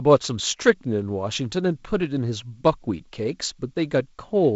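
Speech over G.722 wideband telephone coding, with nothing above 7.7 kHz and the light upper-band hiss and slight lower-band graininess of what sounds like the 48 kbit/s mode; no faults.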